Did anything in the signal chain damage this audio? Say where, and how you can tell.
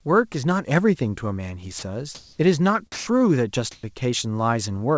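Yes, in call processing. The speech cuts out at 1.79–1.82 s and 2.92–3.07 s, giving way to steady noise or near silence, likely sound dropped by the voice detector.

The background goes featureless at 2.15–2.39 s (about 10 dB up) and 3.71–3.83 s (about 5 dB down), likely comfort noise in place of the background.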